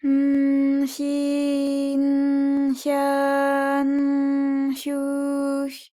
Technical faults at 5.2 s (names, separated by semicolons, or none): none